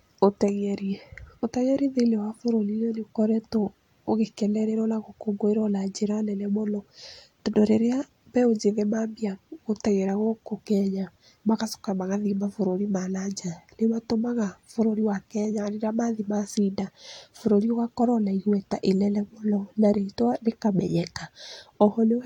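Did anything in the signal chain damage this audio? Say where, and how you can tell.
No, nothing in this speech recording shows chain damage.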